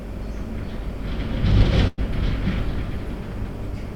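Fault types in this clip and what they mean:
Burst of packet loss: From about 1.87 to 2.00 s, roughly 100 ms of audio never arrived in time, so the receiver stretched the last sound it had for about 102 ms, letting it fade, then jumped ahead with that stretch missing. A spectrogram shows a smeared, repetitive band that dims, then an abrupt change where the audio resumes; the waveform shows a decaying, oddly regular patch with no silent gap, followed by a discontinuity.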